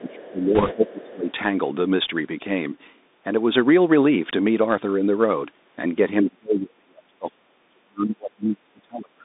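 Throughout, the speech passes through a Bluetooth CVSD headset codec, band-limited to roughly 200 Hz to 3.7 kHz. The plainly audible granular hiss and scratchy sibilants are consistent with a 64 kbps CVSD link. From 0.0 to 1.29 s the speech dips by up to about 15 dB for roughly a second. This is likely speech suppressed in double talk, where the echo canceller attenuated the near talker along with the far-end echo. Within that span, from 0.55 to 0.74 s, bit errors on the Bluetooth voice link add a rushing crackle. The errors fit a rate of a few percent, and because each CVSD bit carries little weight, there are no sharp clicks. From 0.87 to 1.13 s a faint second voice sits about 25 dB below the speech. This is likely the other side's voice leaking through from a loudspeaker the echo canceller missed. From 6.23 s to the end, suppression returns far more deeply, with the speech dropping by up to about 40 dB over roughly three seconds, again likely from double-talk handling.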